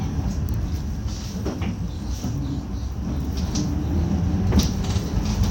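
No technical faults are audible.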